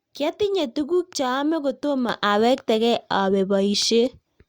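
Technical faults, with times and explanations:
2.09–4.48 s, sudden gain jump: after "tuguk chaame kotomo" the speech and background noise rise together by about 6 dB in one step and stay raised, likely a gain change applied without a ramp. The waveform envelope steps up abruptly, and the spectrogram brightens evenly across all frequencies.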